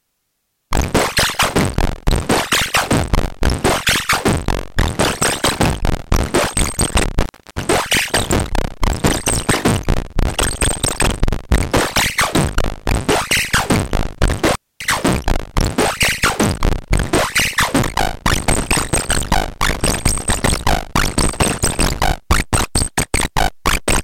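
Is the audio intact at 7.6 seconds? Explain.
No, 7.6 s sits at the tail of an intermittent contact from 7.22 to 7.61 s: a loose connection opens for about 310 ms, dropping the sound to faint hiss with crackle at each edge.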